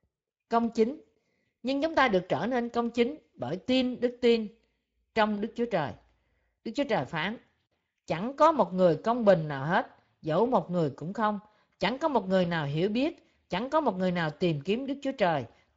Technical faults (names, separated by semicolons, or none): Speex codec